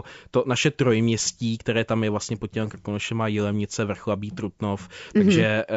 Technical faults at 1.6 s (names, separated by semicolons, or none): none